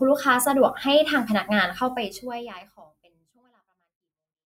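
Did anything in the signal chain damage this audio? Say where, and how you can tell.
No, nothing in the signal chain damaged this speech; the only change is a smooth, deliberate fade-out over roughly the last two and a half seconds.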